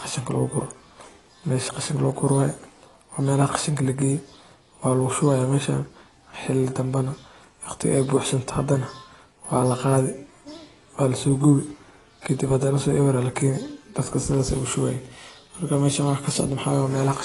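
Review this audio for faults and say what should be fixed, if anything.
Throughout the clip there's plainly audible AAC compression damage. The speech sounds dull and smeared, with a fizzy, warbling texture on sibilants, and nothing reaches above 11.5 kHz. That's likely an AAC-LC encode at a low bitrate, which fits something around 32 kbps. At that rate the encoder chops the top band and quantises the rest coarsely. To prevent it, encode at a much higher bitrate or deliver from a lossless master.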